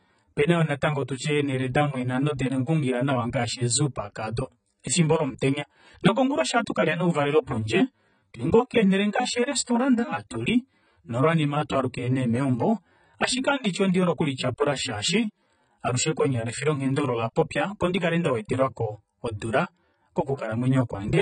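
Throughout, the speech sounds dull and smeared, with a fizzy edge on sibilants. Nothing remains above 9.1 kHz. The likely cause is heavy AAC compression, consistent with about 16 kbps.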